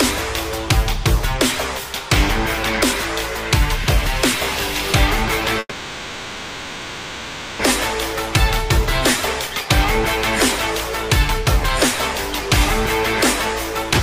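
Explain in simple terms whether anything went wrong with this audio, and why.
Two things went wrong. A call audio freeze occurred from 5.59 to 7.61 s, likely because packets were delayed. The last sound stretches into a fading buzz or hiss for about 2 seconds, then resumes with nothing missing. A jitter buffer speed-up followed from 9.47 to 9.69 s. To catch up, the receiver trimmed many tiny slices in a row, so the audio briefly runs at 121% speed without changing pitch.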